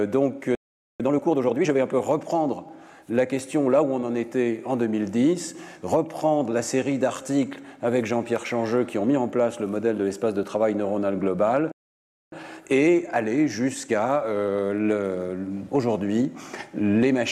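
Twice the player likely ran short of data or had its thread blocked, a playback stall: the audio cuts to silence from 0.55 to 1.00 s, about 0.45 s, and again from 11.72 to 12.32 s, about 0.6 s, then resumes mid-flow. After each gap the player works off its backlog with time-compressed catch-up, trimming and cross-fading small slices so the audio runs hurried at normal pitch: 1.5 times speed from 1.00 to 1.88 s, and a gentler 1.1 times from 12.32 to 15.32 s. At 2.69 s and 10.43 s the samples were likely overwritten before the program collected them, a dropped buffer (overrun). There is no silence at those points. A tiny sliver of audio, only a few milliseconds, simply vanishes and the two sides butt together, heard as a small jump in the sound.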